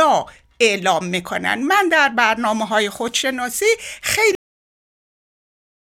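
At 4.35 s the speech just stops dead, a cut-off end: the final stretch of audio never made it out, so the sound is chopped mid-syllable and falls straight into digital silence, with no natural decay, through to the end of the clip.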